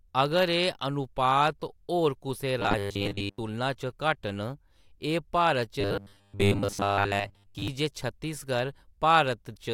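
Speech with robotic sound from repeated short buffers at 2.60 to 3.38 s and 5.81 to 7.68 s, the second ending just before "जे छत्तीसगढ़". The voice becomes a rigid, metallic 100 Hz buzz. A 10 ms slice is likely being repeated while most of the real audio is skipped.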